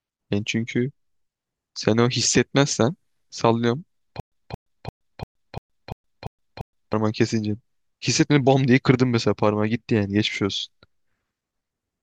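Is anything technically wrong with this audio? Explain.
Yes, there is one fault. A stutter with silent gaps runs from 4.20 s to 6.93 s. The same 225 ms fragment of speech plays eight times, each followed by about 120 ms of digital silence, so it recurs evenly every 345 ms. The likely cause is a player or stream that stalled, replayed its last buffered fragment at each retry, and then ran dry. The speech that should have filled those seconds is missing.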